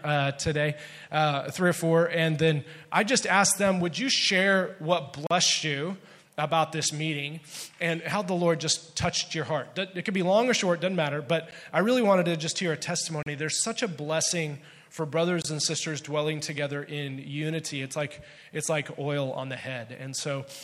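Blocks of digital silence cut the audio at 5.27 s (39 ms), 11.51 s (12 ms, heard as a tick, fitting a 512-sample buffer), 13.23 s (35 ms) and 15.42 s (23 ms, fitting 1024 samples). Each drops out and returns without a fade, from an unfilled output buffer or invalid calculated values.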